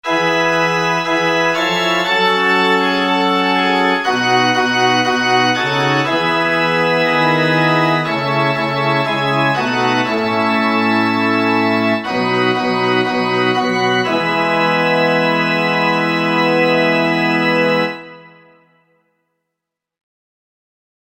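Nothing technically wrong turns up anywhere in the audio, so there's no problem here to point to or explain.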